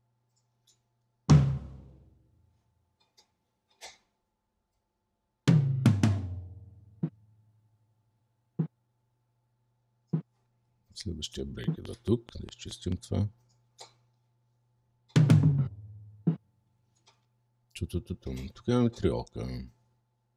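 A train of clicks runs from 11.64 to 12.93 s: about seven similar pops, a few dB above the audio, at a regular 4.68 per second, likely from interference or a faulty connection or power supply.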